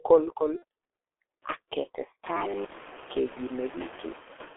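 From start to finish, the speech passes through a G.723.1 codec. Nothing reaches above about 3.4 kHz or below about 300 Hz, and the coding damage is heavy: consonants smear, and the voice has a hoarse, muffled grain, which fits the 6.3 kbit/s mode. This differs from a plain band-limited line, which would be dull but clean. Here the roughness sits inside the band, because the codec's slowly updated voice model cannot follow fast changes.

Noise suppressor artifacts also run throughout, pulling the background down by about 6 dB in the gaps. The noise is held back between phrases and comes up again under the speech, so the floor seems to breathe with the voice. That modest, speech-gated pumping distinguishes it from a noise gate, which would cut to near silence. From roughly 2 s the room noise grows by about 23 dB.

At 0.56 to 0.63 s, VoIP packet loss concealed by the speech codec replaces about 60 ms, which fits two lost 30 ms frames. 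The decoder repeats its last pitch and filter and lets the level sink, so the sound is briefly stretched and fading. The voice then stays weak for a moment after real data returns. A single 30 ms loss at 2.66 to 2.72 s does the same more briefly. Unlike a dropout or a click, there is no silence and no sharp edge.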